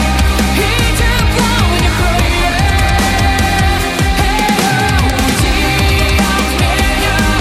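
Chunks out of order at 2.50 to 2.54 s: one 20 ms block of audio was delivered a single chunk late, so it plays after the block that should have followed it. No material is missing, but the two blocks are swapped, which leaves three abrupt joins within about 40 ms. The result is a brief scrambled flicker in the sound.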